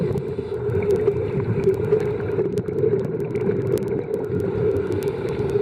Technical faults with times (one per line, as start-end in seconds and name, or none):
0.13-5.60 word clock ticks